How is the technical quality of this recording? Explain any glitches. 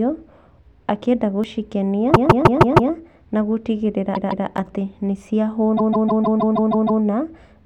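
The recording has clear technical faults: two brief skips and three stretches of stutter in the speech.

At 1.44 s and again at 4.58 s, just before "atĩ nĩ", the audio jumps. These sound like a dropped buffer (overrun), likely caused by the program not reading its samples before the hardware overwrote them. The missing piece is tiny, about 10 ms at the first point and only a few milliseconds at the second. The two sides meet with no gap, so you hear a jump rather than silence.

The stutters are repeated frames. A block of about 0.16 s, which fits a run of several compressed frames, plays again and again. From 2.13 to 2.91 s it repeats five extra times, just before "nagũtigĩrĩra atĩ nĩ". From 4.14 to 4.46 s it repeats twice more, just before "atĩ nĩ". From 5.76 to 7.02 s it repeats eight extra times. The three runs add about 0.78 s, 0.31 s and 1.25 s to the audio.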